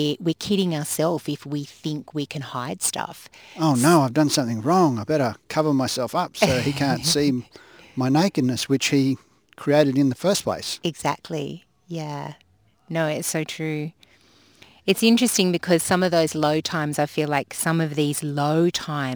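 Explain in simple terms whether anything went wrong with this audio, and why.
Something did go wrong: the speech carries a crude rate conversion from start to finish. The clip's sample rate was changed by simply dropping samples to fit the new rate, with no smoothing filter, which fits a shift from 48 kHz to 44.1 kHz. That leaves a gritty fizz that rides on the louder and brighter sounds. Unlike clipping, it doesn't crack on peaks. Its tones clash with the voice rather than following its pitch.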